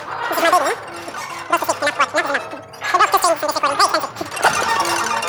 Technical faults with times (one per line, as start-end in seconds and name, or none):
0.00-5.28 wrong sample rate